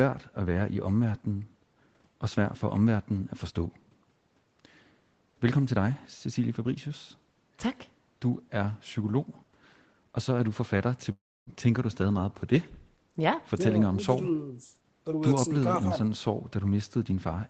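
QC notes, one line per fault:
11.11–11.50 s, long network dropout. The speech breaks off and the last sound is stretched into a fading buzz, then 0.27 s of near silence. Speech resumes with 0.36 s lost, likely because packets stopped arriving and concealment filled the gap.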